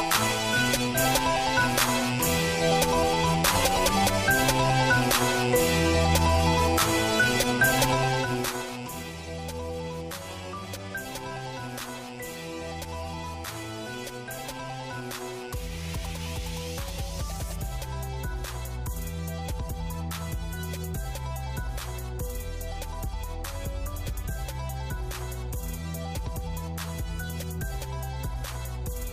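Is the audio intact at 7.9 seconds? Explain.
No: zipper noise runs from 7.88 to 9.06 s, where a level drop of roughly 15 dB moves in unsmoothed 2 dB steps about seven times a second, each step ticking audibly.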